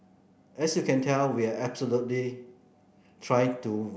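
No technical faults can be heard in the recording. Nothing in the audio points to a problem anywhere along the signal chain.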